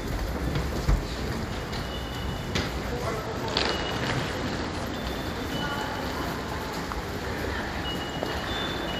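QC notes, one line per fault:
2.86–4.96 s, Bluetooth SBC bit pool drop: the top end dulls and a gritty, granular noise rises under the sound, then clears. The link likely congested, and the encoder cut its bit pool, which fits a fall from 31 to 14, near 99 kbps, starving upper sub-bands and coarsening the rest.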